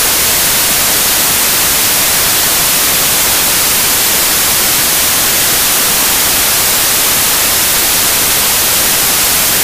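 From the first moment to the end, the audio is dominated by loud, harsh white noise: samples built from the wrong bytes. Each sample has been reassembled incorrectly, whether from a one-byte offset, reversed byte order or a mistaken alignment, so the rapidly fluctuating low-order bits now form the most significant part of every value. The result is broadband hiss at high level.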